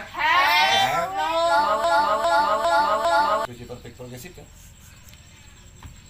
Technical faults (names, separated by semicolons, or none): broken-record loop